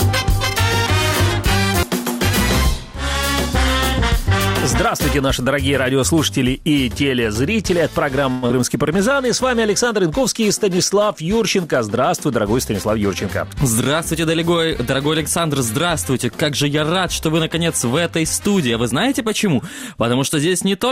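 At 8.31 s the sound breaks down for about a fifth of a second, until 8.53 s. This is most likely a long network dropout. Audio stopped arriving, and the receiver papered over the gap by stretching the last sound it had into a fading buzz for roughly 183 ms. No dead silence ever shows up, but about 80 ms of the real audio is gone for good when things resume. The receiver's delay seems to jump by something like 70 ms around here too.

Right after that, from 8.56 to 9.15 s, there's a jitter buffer slow-down. With its reserve drained, the receiver rebuilds it by repeating tiny slices of the waveform over and over, adding about 64 ms in total. The audio plays at around 90% speed with the pitch unchanged, so everything in that half-second sounds a little stretched and sluggish.

Later, from 12.26 to 14.50 s, the opposite happens: a jitter buffer speed-up. Audio has piled up in the buffer, so the receiver trims short pitch-period-sized chunks again and again to bring the delay back down. 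Something like a tenth of a second gets shaved off across those two-odd seconds. The audio runs at about 105% speed, still at normal pitch, so it comes across as slightly rushed rather than higher.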